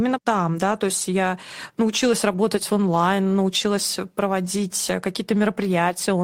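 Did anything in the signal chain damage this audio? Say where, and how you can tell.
Yes. Packets were lost on the network, and each one became a lost packet rebuilt from error correction, played from the low-bitrate copy in the following packet. The speech turns rougher and noisier without a gap at 0.71–0.77 s, 2.31–2.37 s and 4.43–4.45 s, fitting two, two and one 20 ms packets.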